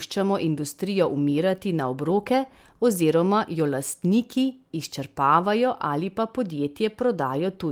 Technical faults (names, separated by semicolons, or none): none